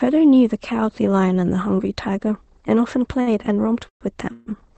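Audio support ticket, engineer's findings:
Short stall from a late packet, 3.21–3.29 s: sound held about 50 ms too long, faint buzz or dip. Packet arrived late and the jitter buffer ran dry, so the receiver stretched the last sound, then resumed at the same point. Nothing lost; timing pushed back about 50 ms.

Call audio freeze, 3.89–4.03 s: sound stops, a brief fading buzz or hiss, then about 110 ms of silence before resuming where it left off. Gap of about 120 ms inserted, nothing dropped.

Call audio freeze, 4.33–4.48 s: sound continues as a held buzz or hiss for about 140 ms with no silence, then carries on from the cut point. Likely packets held up in transit emptying the jitter buffer in both freezes.

Call codec band limit at 8 kHz throughout.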